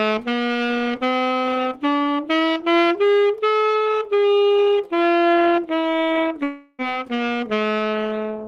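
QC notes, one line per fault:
6.43–6.82 s, long network dropout: a gap in incoming data, likely packets lost or arriving too late, left the receiver about 0.36 s of audio short. It concealed the hole by stretching the last sound into roughly 0.35 s of fading buzz or hiss instead of falling to silence. When real audio resumes at 6.82 s it jumps ahead, and the original material from that stretch never plays.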